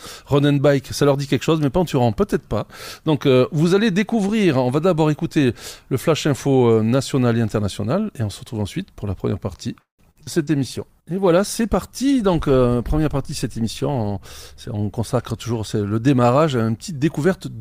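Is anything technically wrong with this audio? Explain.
Yes, three overlapping faults appear in the second half.

From 9.79 to 10.50 s there is repeated packet loss that gives a robotic sound. Four gaps follow one another closely, the longest about 194 ms. The receiver covers them by stretching the last good sound, so the audio turns choppy and robotic. On a spectrogram the concealed stretches show as smeared, repeated frames, and the waveform has short dropouts where concealment fades.

A call bitrate drop runs from 10.34 to 15.81 s. A falling bandwidth estimate pushed the encoder from 96 kbps down to 24 kbps, and it stayed at the lowest rate for about 3.8 s. The coarser coding sounds rough and watery, and high frequencies are cut, which shows as an abrupt ceiling on the spectrogram.

Between 13.24 and 15.50 s a jitter buffer speed-up shortens the audio. The buffer held excess delay and trimmed small pitch-period slices, about 150 ms in total. 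Playback runs roughly 7% fast at an unchanged pitch and sounds hurried. On the waveform the time-compression appears as tiny seamless splices rather than visible gaps.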